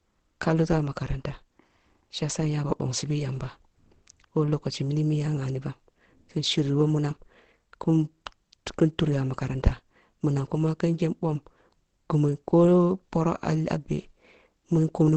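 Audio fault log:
Throughout: Opus compression. The speech sounds muffled and hoarse, with nothing above 8.5 kHz and a rough texture rather than MP3-style swirl. The likely cause is Opus in its SILK speech mode, and the narrowed band fits about 16 kbps.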